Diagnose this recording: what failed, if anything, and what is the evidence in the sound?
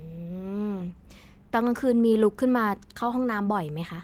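Nothing failed in this recording.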